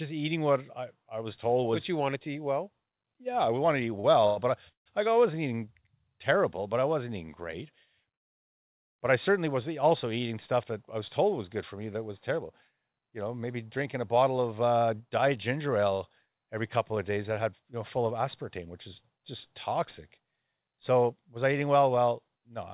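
Just after "we wanted to eat", at 4.00 to 4.06 s, there is a short stall from a late packet. A packet missed its playout time, the jitter buffer ran dry, and the receiver held the last sound for about 40 ms until the packet arrived. Playback then resumed where it had stopped, so nothing is lost, but that instant is drawn out with a faint buzzy smear.

Two call audio freezes follow at 4.26 to 4.39 s and 4.69 to 4.88 s, and a longer one comes after "I wasn't eating great", at 8.15 to 9.01 s. The first fills about 106 ms with a stretched, buzzy continuation of the preceding sound. The second runs about 170 ms, of which roughly 120 ms fades to silence. The third lasts about 843 ms and is nearly all silence, about 840 ms. Each resumes without dropping material, so the gaps add delay. The likely cause is packets delayed in transit.

After "terrible you know maybe", from 13.77 to 19.18 s, there is a jitter buffer speed-up. 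The receiver trimmed short pitch-period segments repeatedly to cut the built-up delay, removing about 0.4 s in total. Playback runs at about 108% with the pitch unchanged and sounds hurried. A second speed-up from 20.20 to 22.51 s runs at about 111% and removes around 0.3 s. Across the whole clip the narrowband call path leaves nothing above 4 kHz.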